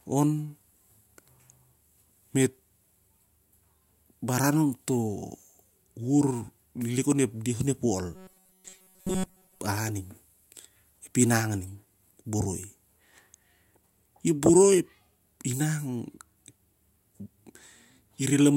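From 8.14 to 9.60 s, new audio is likely arriving too seldom, so the playback fills each gap by repeating the last short buffer while the real speech in between is skipped. For most of that stretch, these repeats stamp a fixed pitch of 188 Hz onto the sound, which fits a buffer of about 5 ms. The result is robotic sound from repeated short buffers: a stiff, metallic buzz that only loosely tracks the speech underneath.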